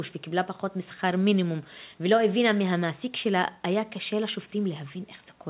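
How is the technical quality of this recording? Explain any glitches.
The speech carries no glitches or dropouts, and its bandwidth stops at 4 kHz, which is the normal telephone-band sound of a call coded as G.711 mu-law at 64 kbps.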